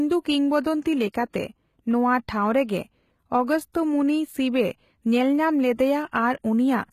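Throughout, the treble is likely rebuilt by HE-AAC compression from copied lower bands at a bitrate that sounds near 20 kbps. Sibilants are plainly gritty and nothing reaches above 14.9 kHz. At 1.12 s, block-wide quantisation noise spills ahead of a sharp attack: a pre-echo heard as an 18 ms hiss that smears the onset.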